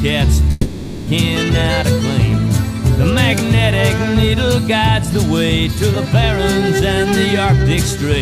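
From 0.51 s to 1.09 s the sound stops and the last moment before it is stretched into a fading buzz or hiss for about 560 ms, with no silent stretch. When the audio returns, that portion is gone, consistent with a long network dropout, likely concealed by the receiver.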